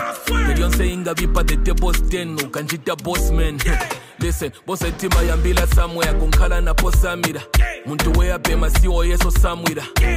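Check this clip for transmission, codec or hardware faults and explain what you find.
Sample clock jitter runs from 0.0 to 7.12 s: the converter's clock wanders by a few microseconds, so each sample lands slightly off time, and the error grows with the waveform's slope. This gives a hiss-like roughness, roughly 35 dB below the signal, that swells on loud, bright passages.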